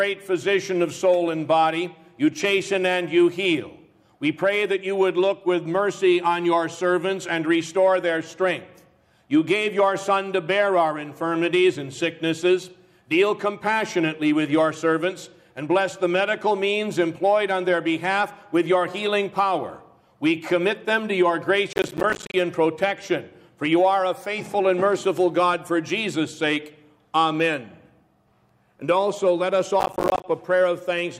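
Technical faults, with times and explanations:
21.73–22.34 s and 29.80–30.24 s, processor overload crackle: dozens of missed deadlines on short buffers, around 10 ms each, leave silent gaps with hard edges that blur into gritty tearing.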